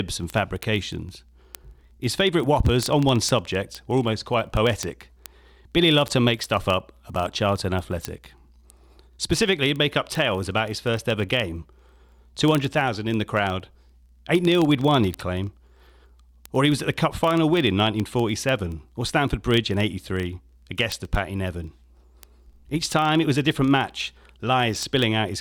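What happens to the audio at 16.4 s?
At 16.4 s the speech is carrying word clock ticks, part of a run that lasts from 0.10 s to 25.39 s. The receiving device runs on a clock that is not locked to the sender's and drifts by something like 700 ppm, so about every 30 ms a single sample is dropped or repeated, giving a fast, steady train of sharp ticks. That even rhythm, with no gaps in the sound, is what sets it apart from buffer dropouts, which click irregularly and cut holes in the audio.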